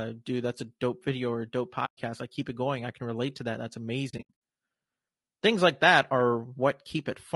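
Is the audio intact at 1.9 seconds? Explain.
No. From 1.85 to 1.98 s there is a hole: AAC frame loss with muting. Roughly 120 ms of audio was lost, and the decoder replaced the missing frames' spectrum with silence. Because AAC frames overlap, the sound fades out and back in across the edges instead of cutting hard, so it is heard as a soft dropout. On a waveform the envelope tapers to a flat line and then swells back. On a spectrogram the full frequency range goes blank, with blurred rather than sharp borders.

Around this moment the speech also has plainly audible roughness and graininess. There is noise filling the gaps between pitch harmonics, and the top band sounds thin or synthetic. This is likely low-delay AAC compression (AAC-ELD), at a bit budget that fits about 32 kbps. Too few bits are left to code each frame's spectrum cleanly. On a spectrogram the harmonic stripes look smeared and speckled, with a haze between them and patchy, blocky energy at the highest frequencies.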